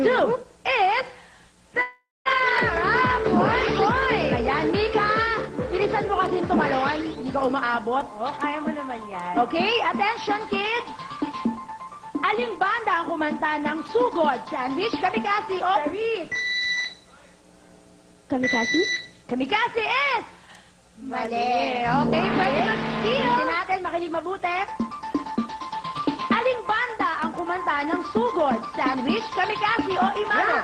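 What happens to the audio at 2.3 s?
Around 2.3 s the sound is coming back from what is likely a long network dropout, lasting from 1.81 s to 2.27 s. About 0.44 s of audio never reached the receiver, which filled the gap by continuing the last sound as a buzz or hiss that fades. For roughly the final 0.19 s only silence or a low steady noise remains. At 2.27 s the audio resumes further on, without the missing part.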